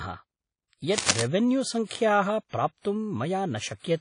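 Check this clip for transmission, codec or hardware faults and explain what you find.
Two faults are present: codec damage across the whole clip and a short burst of scratching noise.

WMA compression, throughout: the speech carries plainly audible transform-codec damage, with ringing, washy smearing and nothing above 10.1 kHz. This is likely a WMA 1 encode at a rate that fits 32 kbps, where long transform blocks spread quantisation noise and weak spectral lines are discarded.

Cable scratch noise, 0.97 to 1.23 s: a dense, uneven rustling burst sits over the speech at roughly the same level. This is likely a worn cable, connector or control carrying a DC voltage being moved, so its contact resistance fluctuated rapidly.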